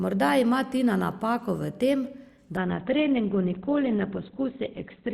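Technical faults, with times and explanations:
2.57–5.13 s, adaptive stream at a lower bitrate: the speech switches abruptly, with no gap, to a degraded version. Nothing remains above 4.3 kHz and codec artefacts increase. This fits the player dropping from roughly 64 kbit/s Opus to about 12 kbit/s after the connection slowed.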